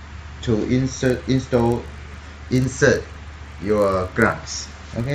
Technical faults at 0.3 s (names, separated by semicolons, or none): none